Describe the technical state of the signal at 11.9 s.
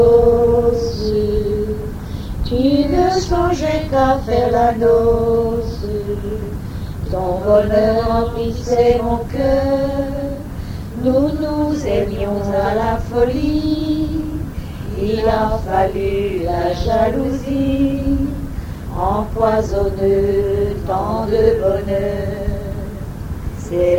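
At 11.9 s the signal is intact, with no audible dropout, distortion, or other technical fault.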